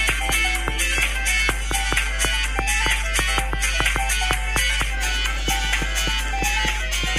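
Mains hum runs through the whole clip, from start to finish. It is a steady low tone at 50 Hz, with a few low harmonics above it. Power-line current is leaking into the signal, likely through a ground loop or a transformer sitting close to the cabling. The hum is strong. It sits at roughly the same level as the wanted sound, so it never fades behind it. It drones on underneath every moment.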